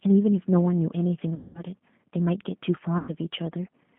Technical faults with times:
0.00-3.98 G.729 codec
1.35-1.61 VoIP packet loss concealed by the speech codec
2.98-3.11 VoIP packet loss concealed by the speech codec

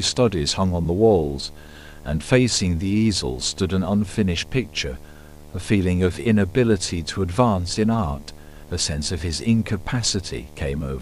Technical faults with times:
0.00-11.01 video or display buzz

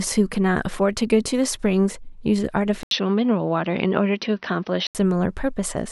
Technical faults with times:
2.83-4.95 input switched to a poorer device

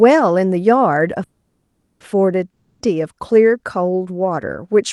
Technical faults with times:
1.23-2.02 call audio freeze
2.50-2.87 long network dropout

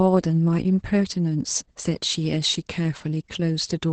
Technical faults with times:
0.00-3.93 Opus voice compression

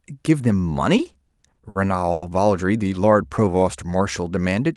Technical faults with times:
0.97-1.76 repeated stalls (stutter)
2.12-2.23 call audio freeze
3.40-4.22 jitter buffer slow-down

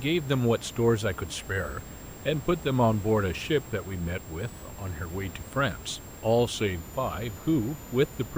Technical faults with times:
0.00-8.38 switching supply whistle

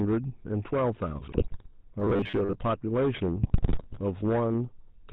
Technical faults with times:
0.00-5.12 hard clipping
0.00-5.12 GSM full-rate codec
1.32-1.67 GSM bit errors
2.00-2.59 robotic sound from repeated short buffers
3.42-4.00 GSM bit errors

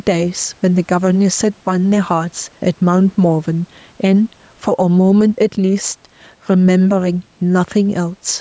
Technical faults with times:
0.00-8.41 gain pumping

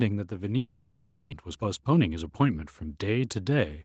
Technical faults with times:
0.28-3.79 automatic gain rising
0.57-1.34 long network dropout
1.43-2.30 jitter buffer speed-up

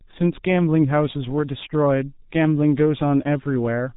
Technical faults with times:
0.00-3.96 G.723.1 codec

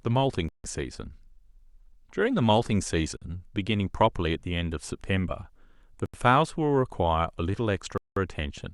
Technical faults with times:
0.49-0.64 Bluetooth stall
3.17-3.22 Bluetooth stall
6.06-6.14 Bluetooth stall
7.98-8.16 Bluetooth stall

